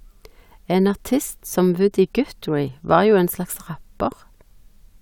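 Listening closely to the speech in this clip, nothing stood out as a technical problem.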